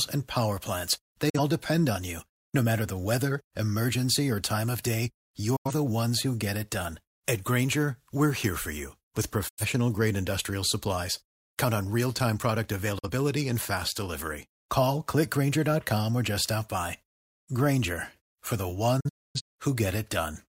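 Speech cut by five digital broadcast dropouts, where the receiver muted on lost or corrupt frames. There are roughly 43 ms holes at 1.29 and 12.98 s, roughly 85 ms holes at 5.56 and 9.49 s, and broken gaps over 19.0–19.41 s. Each appears as a full-band vertical blank with 8 ms fades.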